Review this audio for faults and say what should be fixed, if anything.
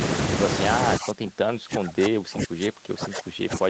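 Speech suppressed in double talk, 0.98 s to the end: the talker falls by up to about 30 dB, likely the echo canceller mistaking overlapping speech for echo. Better double-talk detection in the echo canceller would keep near-end speech at full level while both sides talk.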